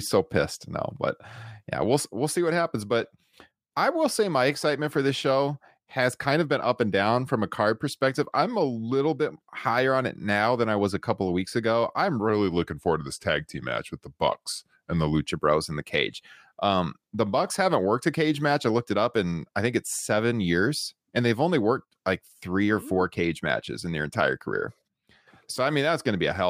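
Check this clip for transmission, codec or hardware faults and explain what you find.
One fault appears, a playback-rate error in the middle of the clip.

Wrong sample rate, from 12.29 to 15.28 s: the samples in this stretch are played back at a slower rate than the one they were captured at, with no conversion. Speed and pitch therefore drop together, to 0.919 of normal speed and about 1.47 semitones lower, which fits 48 kHz audio played out at 44.1 kHz. The speech sounds slightly lower and slower until it returns to its proper pace at 15.28 s.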